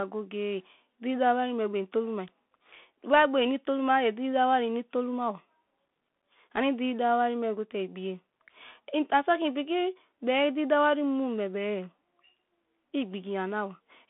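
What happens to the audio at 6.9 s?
At 6.9 s the speech is passing through the Bluetooth CVSD headset codec, as it does for the whole clip. One-bit adaptive delta modulation leaves nothing above about 3.8 kHz, roughens sibilants into scratchiness, and lays a granular hiss under the voice; the codec damage is plainly audible.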